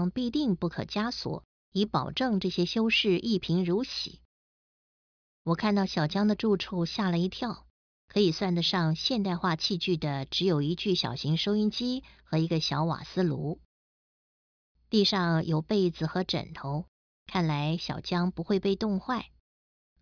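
No technical faults can be heard anywhere in this speech recording. There is no moment in it that calls for a timestamp or an explanation.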